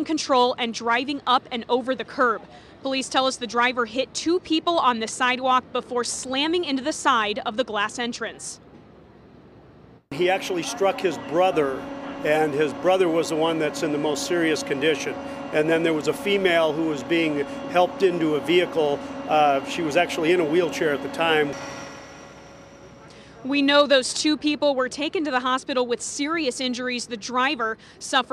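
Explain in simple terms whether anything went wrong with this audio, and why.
Nothing went wrong here.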